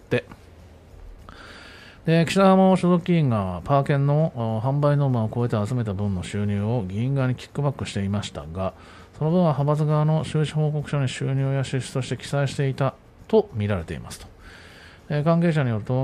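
No technical faults are audible.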